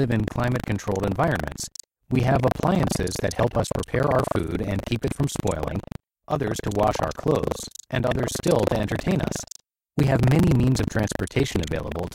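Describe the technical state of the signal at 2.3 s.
Buffer tearing affects 2.3 s, as it does the whole clip. Writer and playback hardware have slipped in the ring buffer, so about a fifth of each 40 ms period replays audio from roughly 150 ms earlier, hard-joined. The speech carries a steady robotic rattle at 25 Hz.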